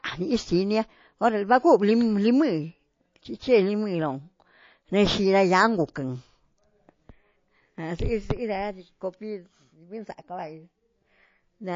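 From start to finish the speech sounds watery and swirly, with the top end dulled, sibilants breaking into metallic chirps, and consonant attacks smeared. The likely cause is MP3 compression at a low bitrate, one that fits roughly 32 kbps. With so few bits, the encoder cuts the treble at a fixed frequency and discards quieter frequency lines that then flicker on and off between frames, producing that unstable, bubbling texture.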